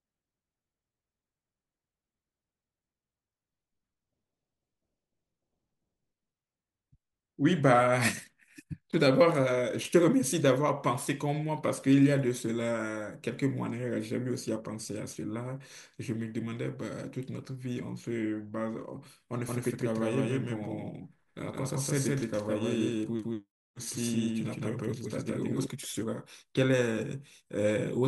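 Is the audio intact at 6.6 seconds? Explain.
Yes, at 6.6 seconds the speech plays through cleanly, with no dropout, click, distortion or other fault at that moment.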